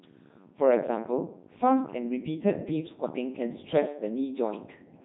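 Throughout, the speech has been stripped to pitch, voicing, energy and a coarse spectral envelope, then rebuilt from sine waves by the Codec 2 vocoder, apparently at 3.2 kbit/s. With the waveform discarded, the voice sounds heavily robotic and buzzy, with nothing above 3.9 kHz.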